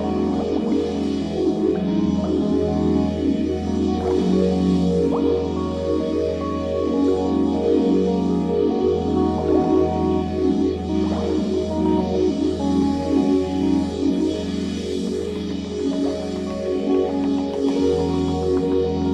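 No technical faults can be heard anywhere in this recording.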